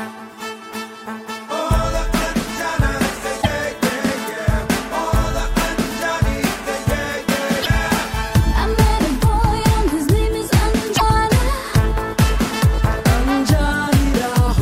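The audio has a short garbled patch and a skip from 10.96 to 11.02 s, roughly two 26.1 ms frames, likely a broken MP3 bit reservoir after dropped frames.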